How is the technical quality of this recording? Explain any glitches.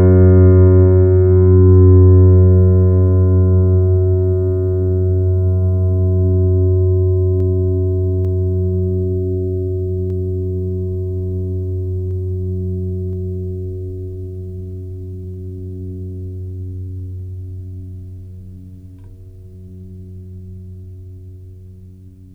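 Five sharp clicks break into the music at 7.40, 8.25, 10.10, 12.11 and 13.13 s. Each is likely dropped samples: a fraction of a millisecond vanishes, the waveform jumps, and a thin vertical spectral line results. Unlike a dropout, no audible gap appears.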